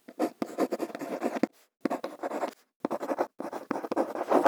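No technical faults can be heard anywhere in the recording, so there is nothing to describe in time order.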